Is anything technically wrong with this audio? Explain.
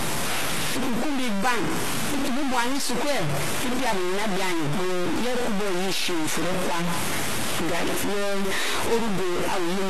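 Yes, two faults run through the whole speech clip. Low bit depth without dither: grainy, gritty distortion that follows the speech and sits almost as loud as it. This is likely truncation to about 3 bits, and the waveform shows coarse stair-steps. HE-AAC compression: plainly audible metallic, lispy s sounds, likely from low-bitrate coding near 16 kbps, where treble is rebuilt from copied lower bands. A spectrogram shows a hard ceiling at 12.3 kHz.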